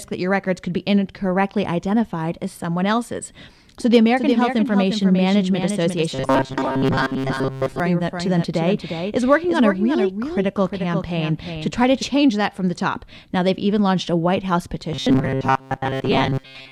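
Speech runs through this clip, and two faults affect it. From 4.17 s to 12.03 s there is a doubled audio track. A second full-band copy of the speech trails the original by about 0.4 s. It sits about 5 dB lower. It has no decay or room colour, and it cuts in and out abruptly at those edges. The likely cause is a second, slower capture path or an edit that leaves two copies out of step. Robotic sound from repeated short buffers appears from 6.10 s to 7.80 s and again from 14.93 s to the end. The speech becomes a stiff, metallic buzz pitched at 133 Hz. It still roughly tracks the speech. Most of the sound in these stretches is repetition, not new audio. A 133 Hz buzz fits a segment of about 7.5 ms being replayed. New audio is likely arriving too seldom, so the software fills the gaps with repeats while real audio is dropped.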